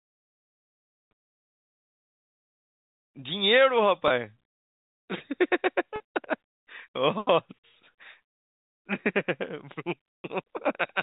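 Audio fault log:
4.08 s, 5.96 s and 10.19 s: packet loss with pitch repetition. Gaps of 20, 40 and 60 ms, consistent with one to three lost 20 ms packets, are bridged by repeating the last pitch period, giving a briefly held, buzzy tone for the shorter two, while the longest fades into silence and the speech returns with a short cross-fade.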